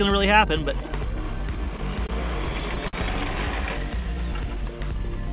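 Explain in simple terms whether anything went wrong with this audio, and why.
Between 1.56 and 2.95 s there are repeated stalls (stutter): the audio arrived late seven times, so the receiver stretched the last bit of sound to cover each wait, the longest about 50 ms. Nothing gets lost, but that stretch hitches and drags.

From 3.81 to 4.79 s you get a jitter buffer slow-down. The receiver was low on audio or had just decided to hold more in reserve, so it padded things out by repeating tiny slices, adding 59 ms. The sound plays at about 94% speed with the pitch unchanged, so it feels slightly drawn out.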